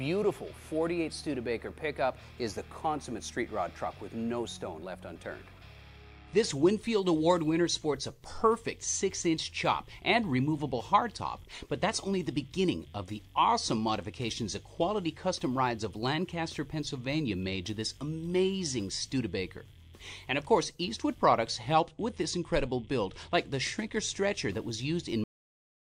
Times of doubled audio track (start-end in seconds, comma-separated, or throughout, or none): none